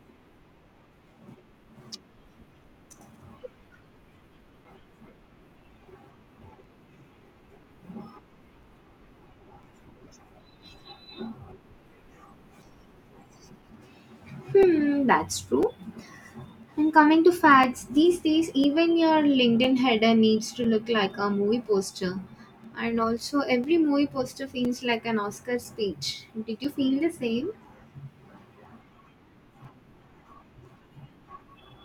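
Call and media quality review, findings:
Periodic USB or driver dropouts: regular ticks through the speech every 1.0 s, 0.65 to 31.65 s, around thirty in all. Each is a few ms of audio replaced by silence. Probable cause is a background task stalling the USB bus or audio driver on a fixed timer.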